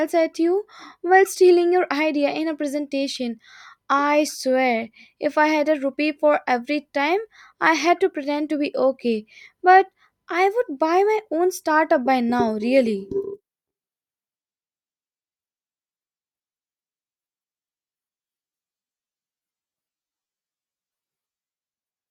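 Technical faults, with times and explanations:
Nothing technical stands out in this speech recording; there's simply nothing here to flag.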